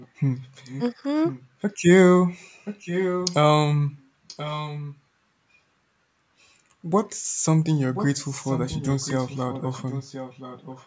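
A delayed copy of the speech, trailing the original by about 1.03 s, surfaces at 0.0–0.08, 0.42–0.8, 1.23–1.66, 2.65–3.35, 4.27–5.0, 7.94–8.08 and 8.27 s to the end. It is quietest at the start and loudest around 2.65–3.35 s. This is likely echo leak: a loudspeaker's output escaping the far side's echo canceller.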